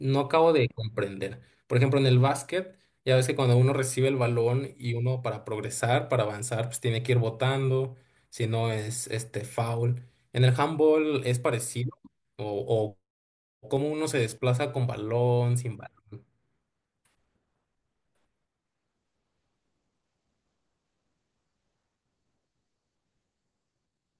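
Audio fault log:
No faults are heard in this speech clip. There is nothing to log.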